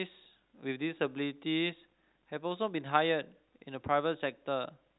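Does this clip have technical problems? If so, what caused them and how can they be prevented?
No, there's nothing wrong here; the speech just has the usual narrow telephone sound, with nothing above about 4 kHz, which fits ordinary 64 kbps G.711 A-law line coding.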